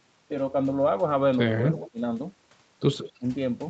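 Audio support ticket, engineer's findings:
Faint delayed repeat of the speech at 1.78–1.91 s and 3.0–3.12 s, about 161 ms behind. Echo leak, likely a far-end loudspeaker echo canceller passing residual pickup, at about 20 dB then about 15 dB down.

Speech dips by roughly 20 dB at 1.83–2.0 s, for around 150 ms in total. Speech suppressed in double talk, likely the echo canceller ducking the talker while the echo overlaps.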